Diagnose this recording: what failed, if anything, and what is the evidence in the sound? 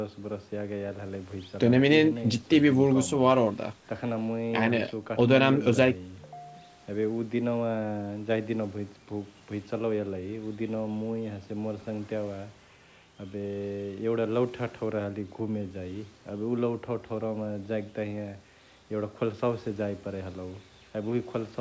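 Nothing failed in this recording; none of the stages shows a fault. The speech carries nothing above about 8 kHz and the lowest bass is trimmed, which is what normal call microphone processing and a wideband call codec such as G.722 on a WebRTC call path leave behind.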